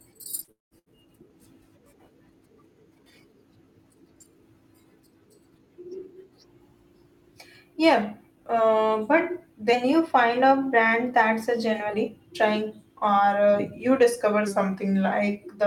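At 0.43 to 0.50 s there is a short concealed packet loss: about 40 ms of audio never arrived in time, and the decoder bridged it by extending the preceding sound before blending back. It comes across as a brief smear in the speech.

From 0.51 to 0.74 s comes a longer gap, likely a long network dropout. About 200 ms is missing. The concealment buzzes or hisses briefly and fades, leaving roughly 160 ms of silence before the audio resumes further on, with the missing stretch gone.

At 0.79 to 0.89 s a burst of packet loss removes about 80 ms. The receiver holds and fades the last sound across the gap, heard as a short decaying buzz or hiss, and then jumps ahead to the next sound.

Three drift correction steps follow, most likely from clock-matching software changing playback rate abruptly. From 5.93 to 7.94 s and from 9.73 to 11.94 s the speech runs 6.3% fast and about a semitone (106 cents) sharp, then snaps back. 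From 14.47 to 15.12 s it runs 6.3% slow and 113 cents flat.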